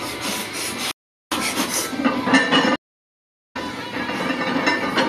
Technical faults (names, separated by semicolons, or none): audio dropout to silence; stream reconnect